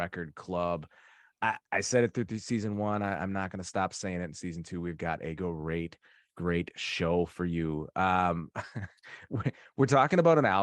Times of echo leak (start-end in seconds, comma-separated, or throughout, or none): none